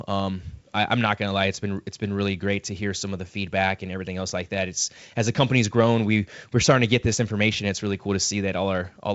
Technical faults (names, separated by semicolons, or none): none